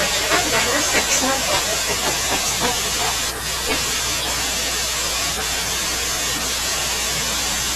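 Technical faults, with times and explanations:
Throughout, mains hum: a steady low tone at 60 Hz sits under the speech for the whole clip, strong enough to be plainly audible at roughly 15 dB below the speech level. The power line's alternating current has leaked into the signal path, probably through a ground loop between connected equipment or magnetic coupling from a nearby transformer. Because the mains frequency never changes, the result is a constant drone rather than a fluctuating noise.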